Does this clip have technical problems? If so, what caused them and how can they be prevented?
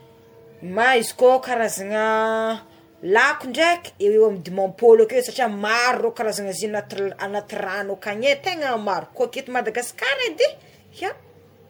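Yes. Generation loss runs through the whole speech clip: it sounds swirly, smeared and hollow, with consonant attacks blurred, more than one lossy pass would explain. The likely cause is decoding and re-encoding about seven times with MP3 at a rate that fits 96 kbit/s. Each pass requantises on a shifted frame grid, so noise and holes accumulate. A spectrogram would show patchy, holed time-frequency blocks below 20 kHz and smeared onsets. To prevent it, keep a lossless master and encode only once, at the end.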